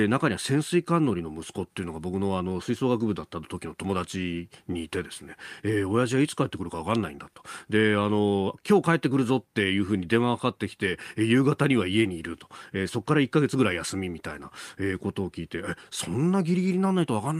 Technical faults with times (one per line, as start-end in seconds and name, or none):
none